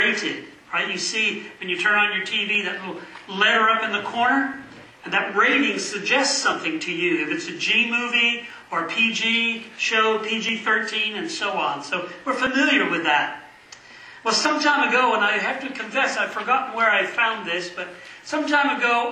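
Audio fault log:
2.55–2.59, 6.53–6.55, 8.50–8.54, 10.49–10.52, 12.47–12.50 and 14.45–14.49 s, overlap between stream segments: each is a brief click or tiny skip where the sound jumps forward, with 25 to 38 ms missing. They land on the boundaries of 2-second segments. Adjacent segments carry overlapping timestamps, so the player trims the supposed duplicate, but that audio was never actually doubled. Real material is discarded, and the waveform steps abruptly at each splice.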